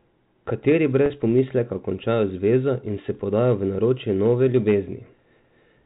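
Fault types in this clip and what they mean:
Packet loss with pitch repetition: About 40 ms of speech at 1.06 s is missing, which fits two lost 20 ms packets. The gap is filled by repeating the last pitch period, so it sounds briefly held and buzzy. A waveform shows identical cycles, and a spectrogram shows frozen harmonic stripes.
Hard clipping: After "v naročje", from 4.26 to 4.75 s, the signal overshoots its limit by about 3 dB and its peaks are sliced flat, causing crackle on the loudest moments. The waveform shows squared-off tops, and a spectrogram shows added high harmonics up to the 4 kHz telephone band edge.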